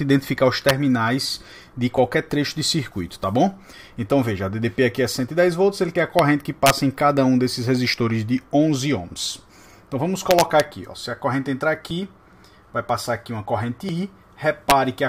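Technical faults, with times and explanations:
0.69, 6.19, 6.66 to 6.70, 10.31 to 10.60 and 14.70 s, integer overflow: violent cracks on loud peaks, sharper than clipping, as peaks up to about 3 dB over the limit wrap to the opposite sign.
1.98, 3.97, 11.91 and 13.89 s, overlap between stream segments: brief clicks or tiny skips where overlapping timestamps on 2 s segments cause about 9 to 18 milliseconds of sound to be cut.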